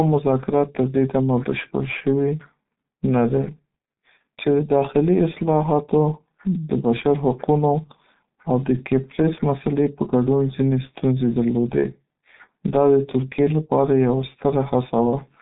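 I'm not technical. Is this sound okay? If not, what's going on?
No, the speech has been squeezed through the G.723.1 codec, an old internet-phone format, and it colours the whole clip from start to finish. Nothing above about 3.8 kHz comes through, and the low end thins out below about 150 Hz, so it sounds boxed-in and muffled, like a cheap phone line. The squeeze here is heavy: the codec's coarse, slow model of the voice leaves it hoarse, and crisp consonants smear together.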